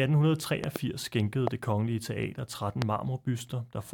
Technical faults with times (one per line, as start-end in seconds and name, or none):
0.64-0.78 loud pop
1.47-1.49 loud pop
2.82-2.84 loud pop